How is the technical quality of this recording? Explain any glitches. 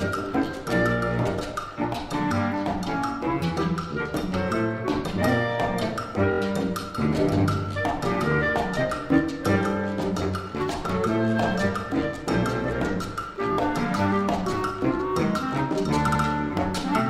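The recording has three audible glitches, all of the same kind.

Repeated frames occur at 6.32–6.39 s, 13.52–13.56 s and 16.07–16.21 s. A short block of compressed audio was decoded more than once. The first two are a single 23.2 ms block, played three extra times and then two. The third is a 69.7 ms block, played twice more. Each is heard as a quick stutter, and together they lengthen the audio by about a quarter of a second.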